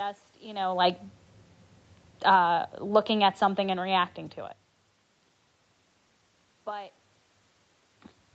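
Automatic gain falling from 2.13 to 4.13 s: the gain control judges the input too loud or its background too strong and eases it down by about 4 dB, so voice and background sink together before "to it".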